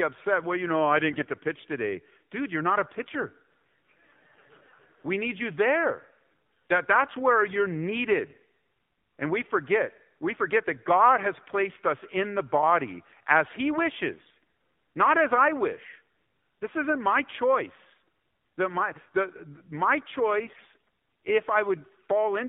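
AMR narrowband mobile codec, present throughout: the speech is confined to a line band of roughly 150 Hz to 3.6 kHz, and the low-rate vocal-tract model, with a buzzy, synthetic edge that points to about 7.4 kbps, rebuilds the voice from sparse pulses, leaving codec damage plainly audible.

AMR bit errors at 1.09–1.26 s, 11.32–11.39 s, 14.18–14.43 s and 20.46–20.76 s: flipped low-priority bits slipped past the checksum, misplacing excitation pulses and skewing gain and spectral values. Pitch and level hold, but the voice turns hoarse, scratchy and gargly, mildest at 11.3 s.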